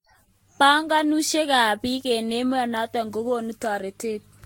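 Speech, and the whole thing has generation loss: swirly, smeared and hollow, with softened consonant attacks. The likely cause is about five rounds of lossy re-encoding, and the character fits Vorbis at around 61 kbit/s.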